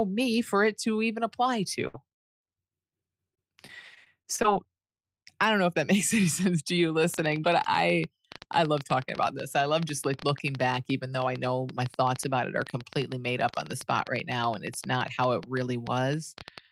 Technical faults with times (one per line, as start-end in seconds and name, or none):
1.87-1.96 burst of packet loss
3.08-4.67 repeated packet loss (robotic sound)
7.14-16.71 train of clicks